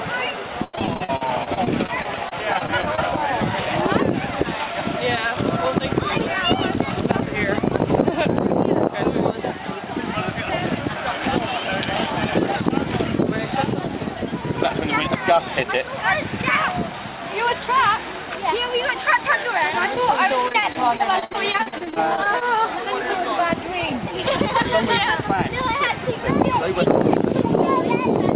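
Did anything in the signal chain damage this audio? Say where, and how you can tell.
Yes, the damage comes from the network and the receiver's jitter buffer, on top of a narrowband call path whose spectrum stops at 4 kHz, consistent with a G.711-type telephone codec.

Repeated packet loss (robotic sound) hits twice, from 0.64 to 3.11 s and from 20.48 to 22.79 s. Each stretch has about twenty short holes, the longest 91 ms in the first and 64 ms in the second. Concealment stretches the last sound into each hole, covering roughly a fifth of each span. The result is choppy, with pieces missing. On a spectrogram you would see repeated, smeared harmonic patches with vertical seams, and the waveform would show copied cycles and abrupt joins.

Jitter buffer speed-up follows at 4.58 to 5.39 s (109% speed, some 70 ms removed) and at 24.65 to 25.34 s (105%, roughly 50 ms removed). After a backlog built up, the receiver cut out pitch-period-sized slices to reduce the delay, so the audio runs hurried while the pitch stays the same. 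The spectrogram shows unchanged harmonic spacing but compressed timing. The waveform has small splice points where cycles were dropped.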